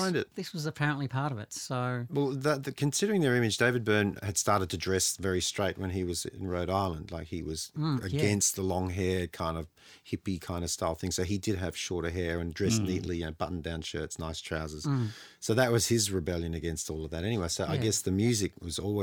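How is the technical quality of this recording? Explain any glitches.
Nothing in the recording stands out as a glitch; it's all smooth sailing with no technical faults to explain.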